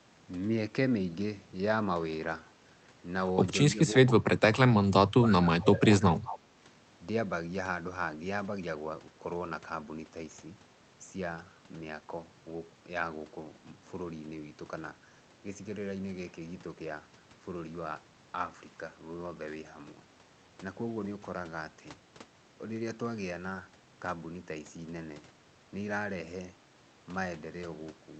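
From 3.74 to 4.57 s, 4.74 to 5.89 s and 6.16 to 6.41 s the speech dips in level by up to around 30, 25 and 15 dB, fading and breaking in pieces rather than clicking off cleanly. This is speech suppressed in double talk, likely an echo canceller muting its own talker while the far side spoke, unlike a dropout or packet loss.

From 6.27 to 6.39 s a faint copy of the speech trails the original by 181 ms, about 15 dB down. This is echo leak, likely loudspeaker pickup the far end's canceller failed to remove. The fixed delay distinguishes it from room reverberation.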